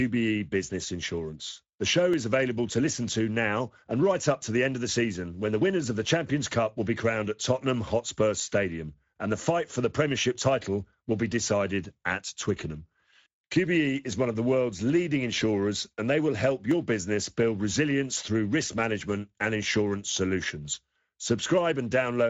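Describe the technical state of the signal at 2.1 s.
At 2.14 s there is a single sharp click, a thin vertical line through the whole spectrum, most likely from dropped samples. Well under a millisecond of the stream goes missing, so the waveform steps straight from one value to a later one. No sound is lost and the click has no tail. That sets it apart from a dropout or a buffer gap, which would leave an audible hole.

Around that click, and through the whole speech clip, the Speex codec damage is plainly audible. This CELP speech coder has too few bits for the excitation here, so the speech comes out noisy and hoarse, at a bitrate near 16.8 kbps. The top band is only a shaped, noise-like fill. It is a steady, constant texture, unlike the one isolated tick.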